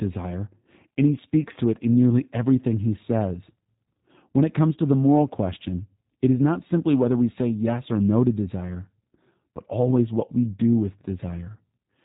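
Speech throughout sounds dull, rough and faintly synthetic, with nothing above about 3.8 kHz, the audible signature of the G.729 codec, consistent with roughly 8 kbit/s encoding.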